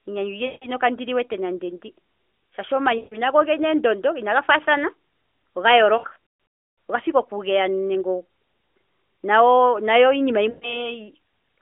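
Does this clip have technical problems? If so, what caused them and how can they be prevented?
Yes. Lost AMR speech frames occur at 0.46 to 0.70 s (just before "kandi liwete nande ndi"), 2.98 to 3.21 s, from about 5.98 s as scattered losses over roughly 0.8 s with a longest run near 0.32 s, and at 10.50 to 10.92 s. Radio errors corrupted frames, so the decoder stretched the last good pitch and vocal-tract settings while lowering the gain. Each gap sounds drawn out and fading rather than abruptly silent or clicking as in a plain packet dropout. Better radio coverage or a more robust codec mode would prevent this.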